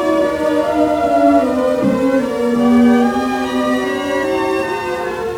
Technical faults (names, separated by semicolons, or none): wrong sample rate